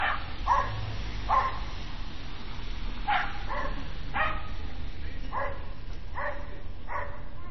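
MP3 compression, throughout: nothing survives above about 5.9 kHz, and weak frequency lines flicker between frames, likely from a starved low-bitrate encode near 24 kbps.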